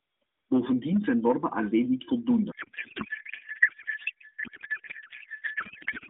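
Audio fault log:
2.52–6.09 s, codec payload misread: speech collapses into garbled warble, which fits octet-aligned AMR frames unpacked as bandwidth-efficient, putting every field in the wrong place.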